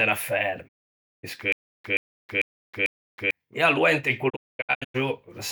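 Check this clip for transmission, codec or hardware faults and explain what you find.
Three faults are audible in this speech: two digital broadcast dropouts and one stutter with silent gaps.

Digital broadcast dropout, 0.67 to 1.25 s and 4.28 to 4.96 s. The receiver mutes on bad frames with a 20 ms fade. About 544 ms is lost first. Then 480 ms is lost in holes up to 224 ms long.

Stutter with silent gaps, 1.52 to 3.31 s. A 126 ms fragment repeats four times, each followed by 320 ms of silence. This is likely a stalled stream replaying its last fragment.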